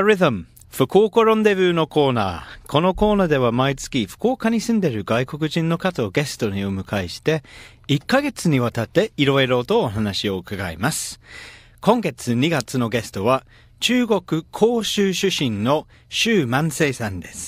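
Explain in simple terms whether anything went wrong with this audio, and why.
Nothing went wrong here; listening through this speech recording, there's nothing that stands out as a technical problem at any point.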